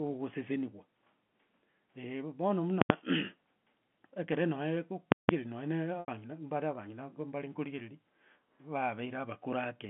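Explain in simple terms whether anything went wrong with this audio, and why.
A calculation inside the audio processing broke down twice, producing invalid numbers that were forced to the loudest possible value. This fault is called invalid numbers at full scale. The output jams at its maximum for a whole block: from 2.82 to 2.90 s, and again from 5.12 to 5.29 s. Each is heard as a sharp, very loud pop where the block begins and another where it ends, with nothing in between. The first gap is brief, at 85 ms. The second is about twice as long.

At 6.00 s, some packets of audio never arrived, which fits about four lost packets. To hide the gap, the receiver kept repeating the last stretch of sound it had, one pitch cycle at a time. This is packet loss with pitch repetition. The missing piece is 80 ms long, so the repeated sound turns briefly buzzy and fades toward silence. The sound then blends back in at 6.08 s. 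All of this comes through a standard telephone line, which cuts off the higher frequencies.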